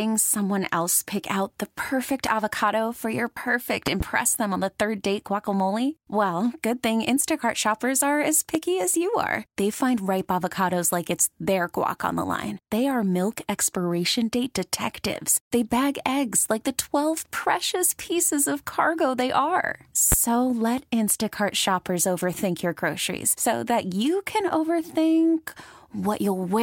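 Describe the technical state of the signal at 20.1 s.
At 20.12 to 20.15 s a single loud pop sits on top of the speech, peaking roughly 15 dB above it. It is likely a brief voltage pulse from a switch, plug contact or static discharge, shaped by the downstream circuitry into one sharp thump while the speech continues beneath it.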